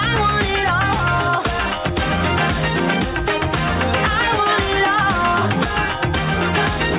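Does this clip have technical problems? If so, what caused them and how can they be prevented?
Yes. Gain pumping runs through the whole clip: the input gain was likely set far too high, so a fast limiter keeps clamping down on every loud sound. The gain swings by around 5 dB under each loud moment, squashing the dynamics. Set a lower microphone gain and a gentler limiter to prevent it. The call path's narrowband cut-off at 4 kHz, which fits a G.711-style codec, is separate from this.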